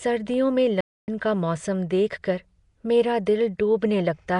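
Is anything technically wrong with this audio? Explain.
Yes, two things. Throughout the speech there's a rough, hissy halo and a smeared, underwater feel. That's likely Nellymoser compression: coarse fixed bit allocation starves weak bands and fills them with noise, and the damage here fits a rate near 44 kbps.

Then, right after "सर्दियों में", the sound drops out from 0.81 to 1.08 s, a gap of about 270 ms, before carrying on. That's likely a playback stall: the player ran dry or got blocked and output nothing until it recovered.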